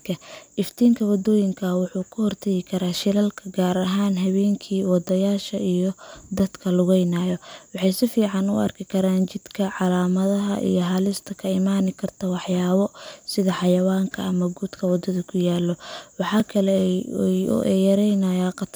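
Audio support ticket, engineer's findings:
Block of digital silence at 6.39 s (5.8 ms) and 16.40 s (2.9 ms): hard cuts to silence heard as ticks, consistent with output buffer underruns; lengths fit 256- and 128-sample blocks.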